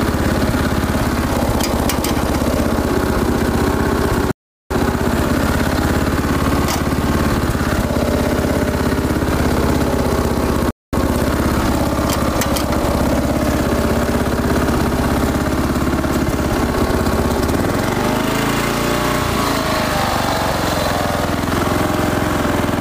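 At 4.31 s and again at 10.71 s the sound drops to silence, for 0.39 s and 0.22 s, then picks up exactly where it stopped: rebuffering stalls, where playback ran dry awaiting data.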